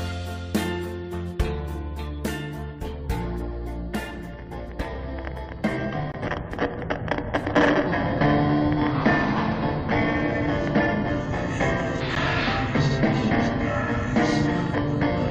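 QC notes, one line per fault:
6.12 to 6.14 s and 12.15 s, gap between stream segments: hard-edged silent holes of 20 ms and about 10 ms, six seconds apart, which fits a 6-second segment length. Because these holes are inserted at segment boundaries, the sound resumes exactly where it stopped, unlike a dropout, which loses audio.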